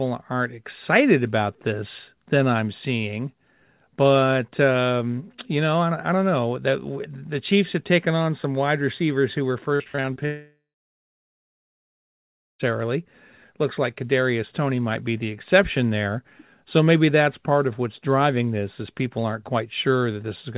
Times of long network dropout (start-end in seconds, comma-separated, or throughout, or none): 10.25-12.61